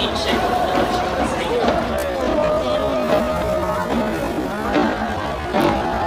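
At 1.88 s the audio drops abruptly to about 0.54 times its original pace and stays there to the end, with no change in pitch. This time-stretched section is likely the result of software lengthening the material to fill a set duration by repeating short slices. It drags. On a spectrogram, the spectral bands keep their frequencies but stretch horizontally, and the waveform shows near-duplicate grain patterns repeating.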